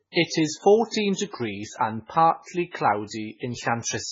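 From start to finish the speech carries heavy damage that is likely MP3 compression at a bitrate as low as 16 kbps. Nothing sounds above 7.5 kHz, and weak detail flickers in and out, giving a watery swirl that a plain low-pass filter would not add.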